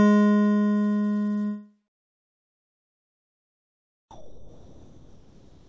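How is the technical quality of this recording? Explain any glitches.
The music carries one clear glitch: the background turns into comfort noise near the end. The audio also stops sharply at 8 kHz, which fits a wideband call codec.

From 4.11 s to the end at 5.68 s, comfort noise replaces the background. The real ambience loses its detail. A steady, featureless hiss takes its place, about 6 dB quieter. The likely cause is discontinuous transmission. The sender's activity detector judged the quiet passage, about 27 dB below the loud parts, as silence and stopped sending. The receiver then filled the gap with synthetic noise.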